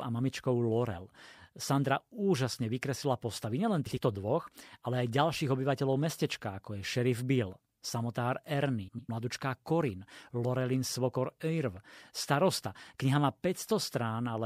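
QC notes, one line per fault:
3.86–3.98 s, frames out of order: two adjacent runs of coded frames, about 52 ms each, were delivered swapped and decoded in that order, so the stretch just before "dvoch ale" plays with its halves exchanged, a brief garbled flutter with no lost time.
8.88–9.09 s, frames out of order: the same swap over longer blocks of about 104 ms each gives a longer scrambled flutter.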